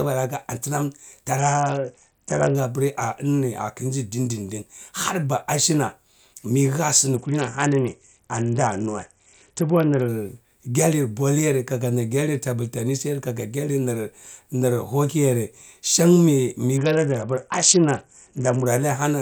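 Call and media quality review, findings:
Bluetooth SBC bit pool drop, 1.39–2.55 s, 7.16–10.08 s, 16.77–18.66 s: speech treble dulls, gritty noise rises; starved upper sub-bands and coarse quantisation, consistent with bit pool falling from 31 to 7, around 61 kbps.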